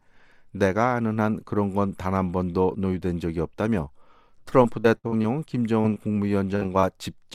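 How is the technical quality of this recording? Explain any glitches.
The recording has several network-related glitches, all in the last three seconds, where parts of the audio were lost in transmission and patched over by the receiver.

From 4.49 to 5.26 s there is repeated packet loss with a robotic sound. Six separate gaps fall within this stretch, the longest about 54 ms. Together they cover roughly a quarter of the span: 184 ms were filled in and 200 ms of real audio never arrived. Each time, the receiver extended the last sound it had, and then the next gap came soon after. The result is choppy and robotic, with pieces missing. On a spectrogram, the harmonic bands would look stepped and smeared in repeated patches. The waveform shows short, repeated segments instead of the natural flow.

There are three short concealed packet losses, at 5.82–5.86 s, 5.94–5.98 s and 6.80–6.84 s. Each replaced about 20 ms of lost audio. 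The decoder continued the preceding sound, carrying on its pitch if it was voiced or using shaped noise if not, then blended back into the real signal. Each one is a brief smear or wobble. On a spectrogram, you would see a thin vertical sliver where the detail is blurred or copied forward, with a slightly unnatural join on either side.

At 6.56–6.63 s there is a burst of packet loss. The receiver filled 55 ms and about 60 ms of the original is missing, so the audio resumes a little further on. The concealment extended the last sound and turned it down across the gap, which heard here is a held buzz or a fading hiss. A waveform would show a decaying, repetitive or noisy patch. On a spectrogram, the content would freeze and fade before it resumes abruptly.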